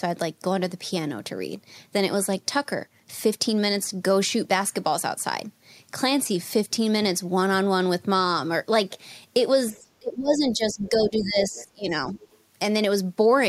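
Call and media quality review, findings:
Speech suppressed in double talk, 9.72–11.96 s. Talker level dips, deepest drop roughly 20 dB, about two seconds affected in total. Likely cause: echo canceller unable to separate near-end talker from loudspeaker echo during overlap, attenuating both. Waveform: envelope visibly caves in across the span. Spectrogram: speech energy drops across the span.

Other side's voice leaking through, four scraps: 9.74–9.81 s (about -35 dB relative to speech), 10.71–10.90 s (about -20 dB), 11.55–11.64 s (about -25 dB), 12.14–12.38 s (about -30 dB). Likely cause: residual loudspeaker echo not fully cancelled at the microphone. Spectrogram: faint, separate harmonic traces beneath or between the main talker. Waveform: low-amplitude bursts.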